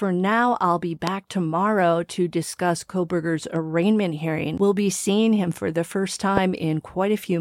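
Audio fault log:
1.07–1.10 s, loud pop: a sudden voltage pulse, likely from a plug, switch or static discharge, entered the signal path between "now I'll be" and "tomorrow to discuss". It is heard as a single sharp pop, about 20 dB above the speech, lasting roughly 20 ms, with the talking continuing underneath.
6.37–6.39 s, loud pop: another brief pulse, likely from the same kind of electrical disturbance, was added right after "him for the first". It gives one sharp pop of similar length, about 15 dB above the speech.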